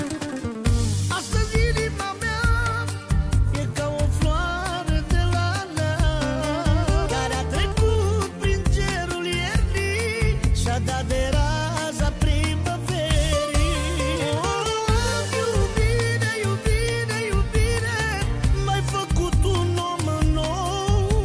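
No technical faults can be heard anywhere in this audio, and the signal stays intact throughout.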